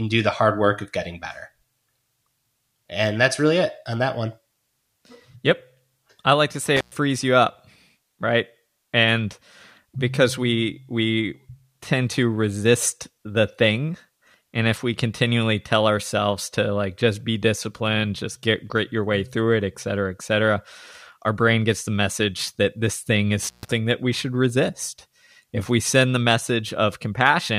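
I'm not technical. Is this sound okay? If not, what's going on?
No. The speech has two brief dropouts caused by an intermittent contact, meaning a loose cable or plug that momentarily breaks the connection. At 6.76 s, after "I like to", the sound crackles and cuts out for about 0.11 s before returning on "you up right". At 23.43 s, after "that this thing is", it drops for about 0.14 s and comes back on "that we should resist". Each gap leaves faint hiss, with crackle at both edges.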